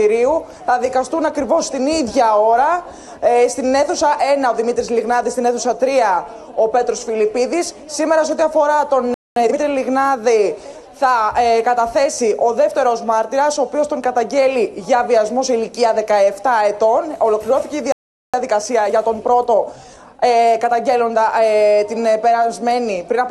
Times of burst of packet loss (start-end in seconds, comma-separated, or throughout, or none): none